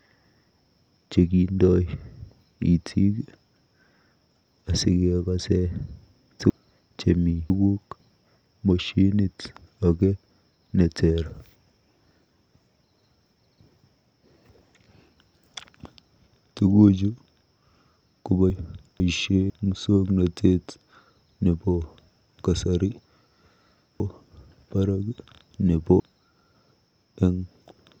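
It's a speech clip with chunks out of order three times: 6.5–8.0 s, 18.5–19.5 s and 24.0–26.0 s. Each time a half-second block lands late, behind the next two, one and three blocks respectively, so nothing's missing but the sequence jumbles, with three hard joins.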